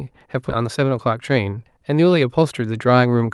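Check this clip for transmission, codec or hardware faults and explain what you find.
Two faults show up, riding on a call codec whose top end stops around 12 kHz, which fits Opus at about 48 kbps.

Skip ahead, 0.49 to 0.51 s: playback jumps forward with no fill. Roughly seven tenths of a second of speech was dropped because the buffer had later audio queued, so the two sides butt together almost directly and the speech suddenly lurches ahead.

Jitter buffer speed-up, 0.61 to 1.60 s: right after the jump the buffer was still running long, so it trimmed small pitch-period slices over and over to cut delay. Speech runs at 112% speed with the pitch unchanged, losing about 150 ms and sounding hurried.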